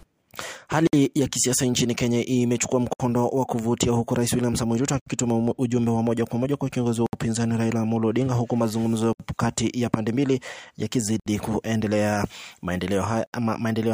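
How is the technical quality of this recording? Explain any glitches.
Quality suffers from one recurring glitch, a gap at a join of encoded pieces, at 0.87, 2.93, 5.00, 7.06, 9.13, 11.20 and 13.26 s. Separately encoded pieces were joined untrimmed, leaving encoder delay and padding. This produces gaps of about 60 to 67 ms every 2 s, their edges smeared so the silent part is shorter, after which the sound resumes where it stopped.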